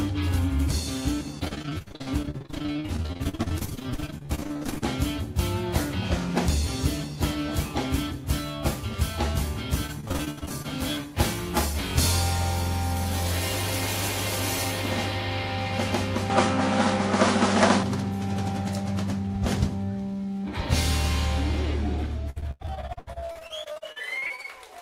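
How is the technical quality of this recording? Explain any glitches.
The technical quality is compromised by three bursts of repeated packet loss and one change of input device.

Repeated packet loss (robotic sound) occurs from 1.39 to 4.87 s, from 9.87 to 10.66 s, and from 22.30 to 24.46 s. Packets went missing in quick succession. Each hole was filled by stretching the last good fragment, which covered about 42%, 32% and 38% of those stretches. The result is choppy audio with pieces gone. The gaps reach 46, 68 and 97 ms. On a spectrogram these stretches show smeared, repeated slices. The waveform shows blocky, copied segments.

Between 16.30 and 17.83 s the tone turns duller, with nothing above 10.5 kHz. A new noise floor appears, roughly 30 dB below the signal, and the level shifts by around 5 dB. There is no silence at the change. This points to an input switched to a poorer device, likely a different microphone or a headset's call profile. 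A spectrogram would show the upper band cut off sharply, and the waveform would show a step in amplitude.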